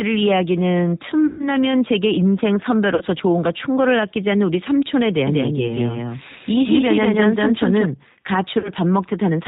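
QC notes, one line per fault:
throughout, G.729 codec: everything above 4 kHz is gone and the speech sounds a bit rough and synthetic, since it's rebuilt from a filter and a few pulses at 8 kbit/s.
1.27–1.48 s, 2.95–3.04 s, 8.60–8.71 s, VoIP packet loss concealed by the speech codec: the decoder stretches the last sound into a fading buzzy tone or coloured noise, and the speech stays weak briefly after each gap. The lost stretches are 120, 60 and 40 ms.
5.27–7.85 s, doubled audio track: a second full-band copy trails by around a fifth of a second at about equal loudness, with no room colour, likely a second, slower capture path.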